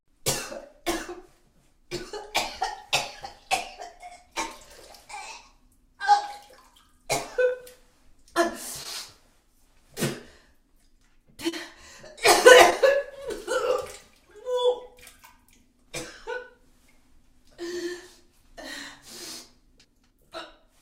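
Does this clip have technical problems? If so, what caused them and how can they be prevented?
Yes. There is short concealed packet loss at 7.49 to 7.53 s, 8.83 to 8.87 s, 11.49 to 11.54 s and 12.70 to 12.74 s. Each time, 20 ms of audio failed to reach the decoder in time, and 40 ms at 11.49 s. The receiver covered each gap by extending the preceding sound, either from its pitch or as shaped noise, and then blended back into the real audio. The result is a brief smear or wobble. A steadier network path with a larger jitter buffer, or forward error correction, would prevent it.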